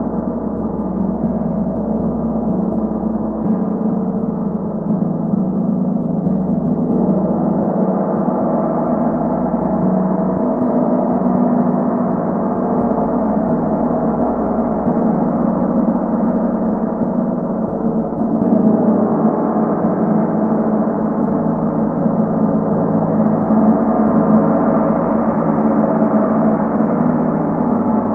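No faults are audible anywhere in the recording of sounds.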